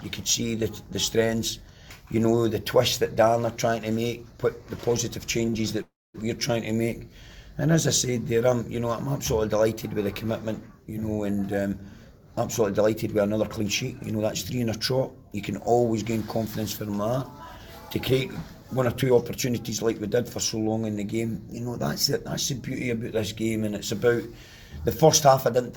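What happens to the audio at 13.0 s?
At 13.0 s the audio is inside a jitter buffer speed-up running from 11.51 to 14.20 s. Having built up excess delay, the receiver repeatedly cuts out one or a few pitch periods at a time, trimming about 0.2 s in total. Playback runs at 107% with pitch unchanged, so it sounds slightly hurried. A spectrogram shows harmonics at the same frequencies but events packed closer together. The waveform shows repeating cycles of unchanged length with small splice points.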